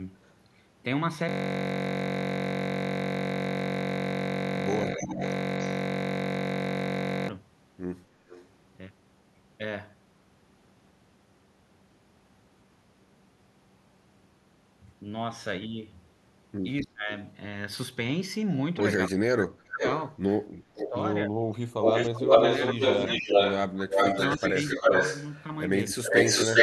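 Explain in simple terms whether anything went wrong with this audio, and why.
Yes, two things went wrong, and they get worse toward the end.

The first is an echo leak. A delayed copy of the speech comes back, a quarter to nearly 0.4 seconds late. It is faint at 0.23 to 0.32 s, clearer at 8.28 to 8.46 s, then almost as loud as the speech at 19.81 to 20.9 s. From 21.82 s to the end it is even louder than the speech. The likely cause is someone on a loudspeaker whose echo canceller let its own playback slip back into the call.

The second is speech suppressed in double talk. The speech briefly dips at 4.93 to 5.22 s, 16.82 to 17.1 s and 25.9 to 26.15 s. Between 19.07 and 24.91 s it drops deeply, for about two seconds in all, in pieces. This is likely an echo canceller turning down its own talker along with the echo when both sides spoke at once.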